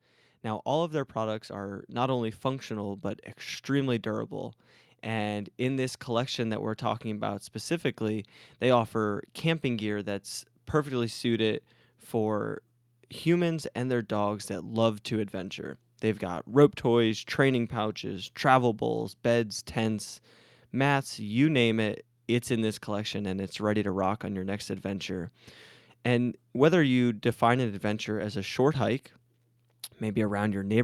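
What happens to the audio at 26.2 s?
Nothing goes wrong at 26.2 s; the speech carries on intact through that moment with no audible fault.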